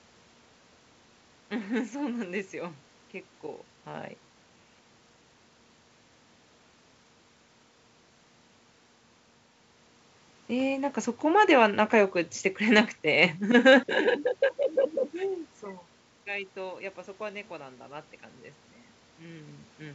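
A speech recording with no technical fault to report. Room noise sits in the background, the talker's level shifts at the microphone a little after 3 s and again past 15 s, and the G.722 wideband telephone coding at 64 kbit/s leaves the band open to about 7 kHz or a little above, with nothing above it.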